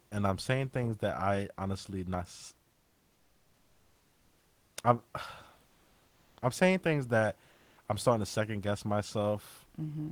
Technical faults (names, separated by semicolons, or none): comfort noise in place of the background